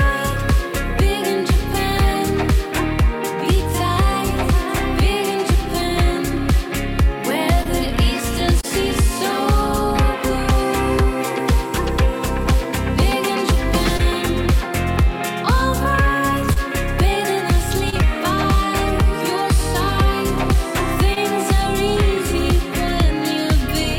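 Short concealed packet loss at 7.63, 8.61, 13.97, 16.53, 17.90 and 21.14 s: 20 ms of audio arrived too late, and the receiver's extrapolated fill and crossfade leave a brief smear or wobble.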